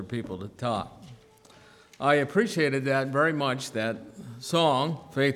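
No technical faults can be heard anywhere in this clip. At no point does anything in the audio stand out as a defect.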